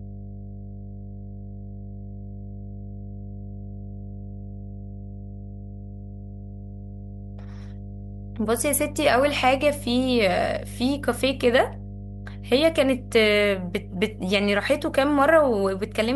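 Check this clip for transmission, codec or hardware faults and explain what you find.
There's one fault here, and it runs the whole way through the speech: mains hum. It's a steady low tone at 50 Hz, sitting only roughly 15 dB below the speech, so it's clearly audible under everything and obvious in the pauses. That points to power-line energy leaking into the signal path, typically through a ground loop between connected equipment or from a transformer sitting too close to a cable or input stage.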